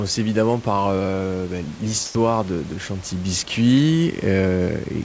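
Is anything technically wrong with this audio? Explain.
Yes. From 2.06 to 2.15 s, just after "évidemment par euh ben" and before "de de", the speech gives way to a short stretch of steady, featureless noise for about 90 ms, and roughly 40 ms of real sound goes missing before speech resumes. This is likely sound dropped by the voice detector: the sender judged the sound to be background and stopped transmitting, so the receiver filled the gap with comfort noise until the detector triggered again.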